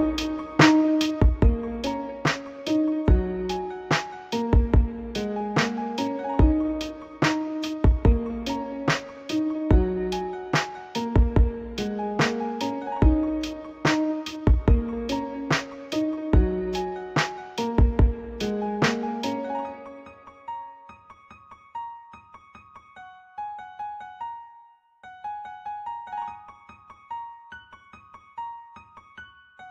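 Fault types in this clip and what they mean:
One channel drops out: at 1.21 s the level falls abruptly by about 6 dB and stays down for the rest of the clip, most likely because one side of a stereo feed went silent before the two channels were summed to mono. Unlike a plain gain change, anything that existed only on the lost side would vanish outright rather than getting quieter; here, though, the sound is otherwise unchanged apart from its loudness.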